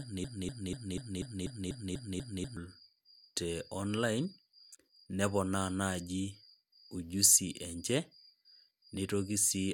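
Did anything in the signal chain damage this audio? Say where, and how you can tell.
Yes. A broken-record loop is already under way at 0.0 s. A 244 ms fragment repeats back to back until 2.57 s, likely from a stalled playback buffer.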